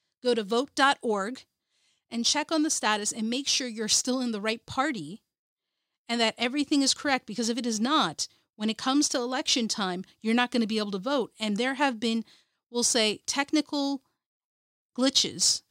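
Nothing technically wrong turns up anywhere in this bit of speech, so there's no fault to point to.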